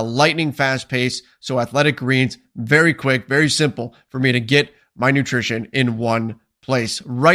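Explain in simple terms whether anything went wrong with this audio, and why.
Nothing went wrong here; the speech comes across steadily with no glitches, dropouts or odd noises to point to anywhere along the way.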